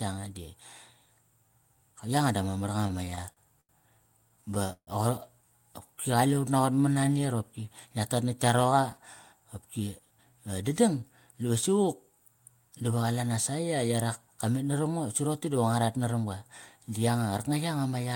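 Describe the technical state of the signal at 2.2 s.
At 2.2 s the signal is intact, with no audible technical fault at that moment.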